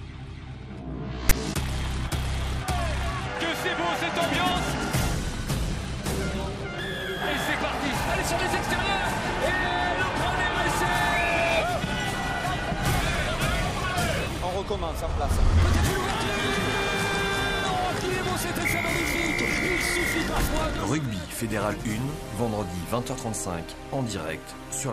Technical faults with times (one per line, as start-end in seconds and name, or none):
1.29-1.32 file tags played as audio